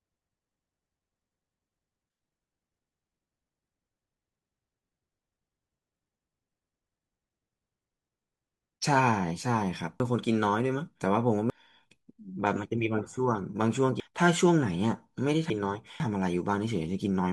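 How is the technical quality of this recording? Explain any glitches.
The recording is marred by four jumbled moments in the speech, at 3.5–4.5 s, 7.0–8.0 s, 10.0–11.5 s and 14.0–16.0 s. These are chunks out of order: a 500 ms block plays one, two or three chunks late, leaving hard joins.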